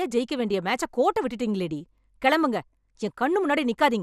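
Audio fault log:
throughout MP2 compression: dull, gurgling, granular speech with nothing above 14.4 kHz, likely Layer II switching off and coarsely quantising upper sub-bands, fitting about 80 kbps.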